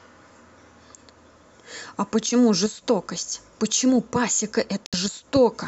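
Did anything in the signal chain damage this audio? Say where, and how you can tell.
Yes, there's one hole near the end of the speech, from about 4.86 to 4.94 s. The sound simply drops to silence for roughly 80 ms, then picks up again as though it kept running underneath rather than pausing. That points to the playback stage, most likely a Bluetooth dropout: a few packets didn't reach the headphones in time, which fits about three lost packets, and the output stayed silent until fresh data arrived.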